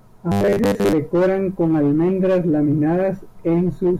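From 0.32 to 0.93 s the speech turns into robotic sound from repeated short buffers: a rigid metallic buzz at 100 Hz, likely from a 10 ms chunk replayed while most of the real audio is skipped. Unlike silent dropouts, it never goes quiet.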